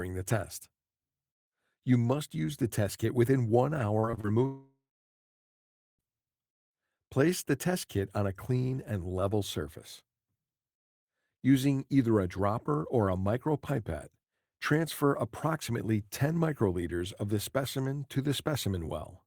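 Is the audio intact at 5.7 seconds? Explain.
No. At 5.7 seconds the clip sits inside what is likely a long network dropout, running from 4.46 to 6.01 s. The audio packets stopped arriving for about 1.54 s. The receiver first stretched the last received sound into a fading buzz or hiss, and after that left about 1.19 s of near-silence. At 5.7 s only that silence remains. When the sound returns just after 6.01 s, the lost stretch is gone for good.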